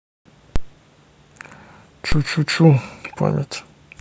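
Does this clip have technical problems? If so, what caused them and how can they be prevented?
Yes. There are two DC steps, at 0.56 s and 2.12 s. At each point the waveform's zero line jumps abruptly by about -7 dBFS, and the speech rides on top of the shifted baseline. The sudden offset is heard as a low thump. The offset then drains away gradually, at the rate of a high-pass around 5 Hz, so each jump settles rather than holding. A converter recalibrating mid-recording or an offset-carrying input being switched in would produce this. To prevent it, keep offset-bearing sources and converter recalibration out of the live signal path, and apply a DC-blocking high-pass at the input.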